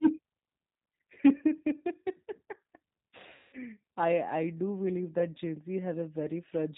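A speech recording carried through the G.729 codec, at a rough, slightly synthetic quality typical of 8 kbit/s coding, with the spectrogram showing nothing above 4 kHz and smeared harmonics. From 3.35 to 3.57 s, VoIP packet loss concealed by the speech codec turns about 180 ms of missing audio into a stretched buzzy tone or coloured noise that fades. On a waveform it shows as a repetitive, decaying pattern, and on a spectrogram as flat horizontal bands.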